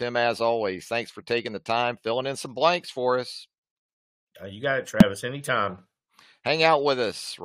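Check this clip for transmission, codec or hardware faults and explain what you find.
One fault: damaged data in a compressed stream, from 5.00 to 5.03 s, right after "you got it". Corrupted bytes made the decoder misread frames and resync, giving a short glitch; on a spectrogram, a brief broadband smear; on the waveform, a discontinuity.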